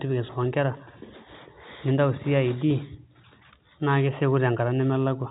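Speech with no technical faults to report.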